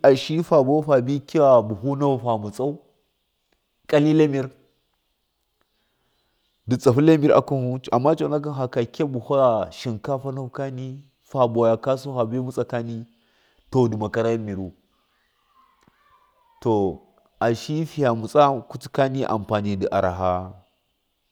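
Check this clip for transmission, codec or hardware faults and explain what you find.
Nothing turned up here: the speech comes through steady and intact, with no dropouts, glitches or hardware trouble to report.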